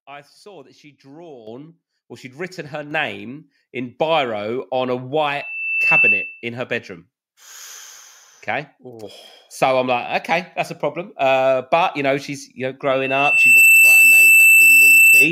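The microphone volume stepped up four times: about 10 dB at 1.47 s, about 5 dB at 2.91 s after "or she'd written her", about 2 dB at 3.93 s before "biro on a", and about 3 dB at 9.03 s. Each time, software raised the input gain, so voice and background jump together.

At 12.9 s, after "know she's you know", a loudspeaker feedback squeal starts. A 2.7 kHz tone grows within a second to roughly 10 dB above the speech. It lasts to the end, because the microphone-loudspeaker loop gain exceeds one there.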